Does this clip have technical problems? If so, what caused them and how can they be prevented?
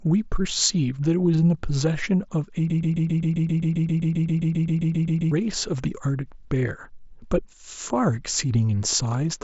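Yes. From 2.70 to 5.31 s the speech falls into a broken-record loop: a 132 ms fragment repeats back to back about 20 times, and the speech due in that span is lost. The likely cause is a stalled player or stream re-sending its last held buffer. Monitoring the stream for stalls and muting instead of replaying stale buffers prevents it.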